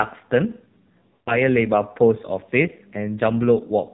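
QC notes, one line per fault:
Throughout: AMR narrowband mobile codec. The speech has been squeezed through a low-rate AMR-NB mobile encoder whose heavy damage points to one of its lower modes, near 5.9 kbps. The audio is band-limited to 4 kHz and rebuilt from a coarse vocal tract model excited by sparse pulses. With so few bits to describe each short segment, the speech comes out dull, buzzy and synthetic, with the upper band simply missing.
1.14 to 1.38 s: lost AMR speech frames. About 120 ms of speech failed to arrive intact, which fits a run of six 20 ms frames rejected by their checksum. The decoder filled the gap by repeating its last good pitch and vocal tract settings at steadily falling gain. The sound smears into a drawn-out tail that fades toward silence before decoding resumes, and the speech returns weak or rough for a moment.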